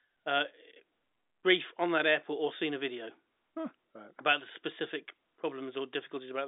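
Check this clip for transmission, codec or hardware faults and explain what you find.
No faults found.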